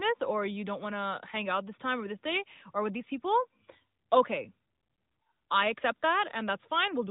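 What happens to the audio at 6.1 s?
Nothing goes wrong at 6.1 s; the speech there is intact and carries on without any dropout, glitch or other fault.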